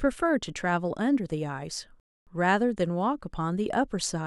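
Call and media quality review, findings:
Rebuffering stall at 2.00–2.27 s. Speech halts into silence for about 0.27 s, then picks up at the exact point it stopped. Probable component: playback buffer / delivery path; player drained its downloaded audio and waited for more data. Distinguishing point: nothing is skipped or concealed, and the gap simply adds 0.27 s to the running time. A packet-loss dropout would instead remove audio or fill it with a synthetic patch.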